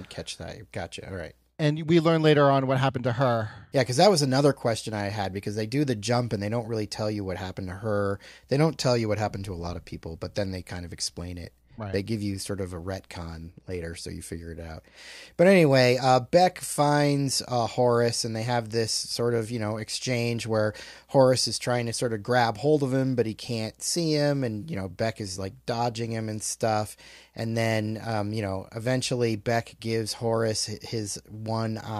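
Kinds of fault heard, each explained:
Nothing to flag here: listening across the whole recording, no technical faults turn up in the speech at any point.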